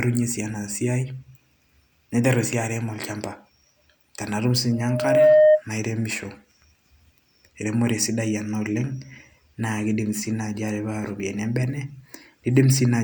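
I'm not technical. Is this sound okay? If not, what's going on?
No. From 4.72 to 5.62 s there is loudspeaker feedback squeal: a microphone is picking up its own loudspeaker, and one tone near 612 Hz feeds on itself, swelling over about half a second into a steady whistle clearly louder than the speech.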